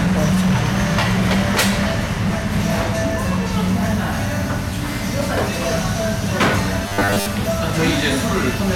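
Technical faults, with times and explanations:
Throughout: hard clipping. The level is pushed about 16 dB past what the chain can pass, so every peak gets sliced flat, and a few percent of the samples end up sitting on that ceiling. Those squared-off tops spray extra harmonics high up the spectrum, which is why the loud moments come across as a gritty, harsh fuzz rather than just sounding loud. Anything with real energy in it breaks up.
6.86 to 7.26 s: robotic sound from repeated short buffers. For about 0.4 s the sound turns into a stiff, metallic buzz pinned at 100 Hz. Most of that stretch is the same tiny slice looping over and over while the actual audio gets skipped. The likely cause is fresh audio showing up too late, so playback keeps replaying the last chunk. A 100 Hz buzz fits a chunk about 10 ms long, repeating a hundred times a second.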